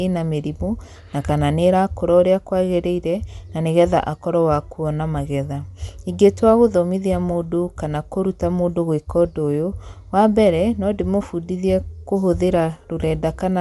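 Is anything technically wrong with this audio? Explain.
Yes. Two problems can be heard in this speech clip.

The first runs throughout. It is most likely Bluetooth LC3 compression. The codec damage is plainly audible. LC3 cuts the audio into short frames, transforms each to the frequency domain, and spends its bits where it judges them most needed. Upper bands that go short are zeroed and filled with noise. The result here is a breathy, grainy edge on the voice. The artefacts fit 10 ms frames at about 48 kbps.

The second is a lost LE Audio frame at 7.77 s. About 10 ms of audio went missing, which fits one dropped frame. The decoder hid the gap by reusing the previous spectrum with random signs. That keeps the level roughly steady but scrambles the detail. The gap is too short for the gradual fade a longer loss would bring.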